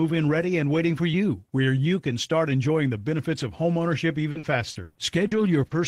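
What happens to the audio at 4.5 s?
At 4.5 s you're in the middle of a stretch of repeated packet loss (robotic sound) running from about 4.31 to 5.74 s. Six dropouts land in that window, the longest 120 ms, and each one gets papered over by stretching out the last bit of speech that arrived. That patching covers 320 ms in total, roughly a fifth of the span, so the speech comes out choppy, with little pieces of it missing.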